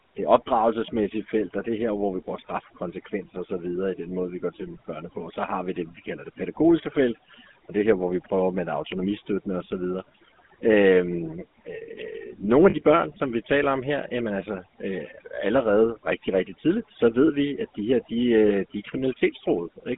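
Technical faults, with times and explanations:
Throughout, overdone noise removal: the denoiser was pushed too hard, so the background drops and breaks up into twinkling specks and quiet parts of the speech go with it.
Throughout, GSM full-rate codec: the old 13 kbps phone codec rebuilds speech from a vocal-tract model and sparse pulses, leaving a buzzy, gravelly roughness and nothing above about 3.6 kHz.
12.70 s and 18.48 s, lost GSM frames: dropouts of about 40 ms after "nogle af" and 20 ms before "de er", where the decoder repeats the last good frame and the sound rings briefly, metallic and rough.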